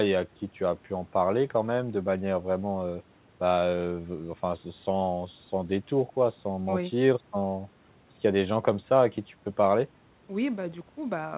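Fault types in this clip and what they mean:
No faults can be heard anywhere in the speech. The call path is audible as the narrow telephone band of G.711 mu-law at 64 kbps, with nothing above 4 kHz.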